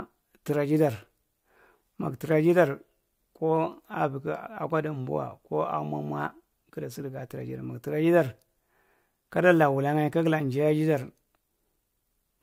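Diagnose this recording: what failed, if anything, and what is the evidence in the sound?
Nothing stood out on listening to this speech recording that would point to a failure at any stage of the chain.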